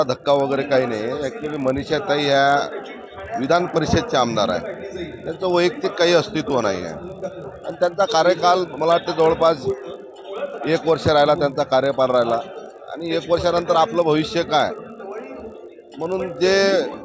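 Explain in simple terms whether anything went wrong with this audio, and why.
A steady buzz runs under the sound from start to finish. It comes from a resampler restarted on every block. The audio was converted from 48 kHz down to 16 kHz in 20 ms chunks, and each chunk was handled as if nothing came before or after it. That leaves a tiny glitch at every seam, 50 times a second, which blurs into a buzz. Unlike mains hum, it vanishes in quiet moments and is only present while there is sound.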